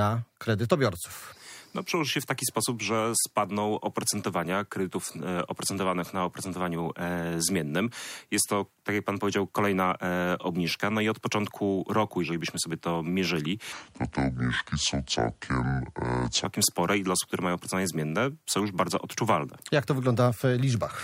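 From 13.73 s to 16.45 s there is a section at the wrong speed: the audio runs at 0.641 times its proper rate, so it drags noticeably and the pitch drops by about seven semitones, roughly a fifth, at the same instant. Both shift together at the boundaries, with no gradual glide in or out. The likely cause is this stretch being played back or rendered against a mismatched clock, stretching its duration and lowering everything uniformly.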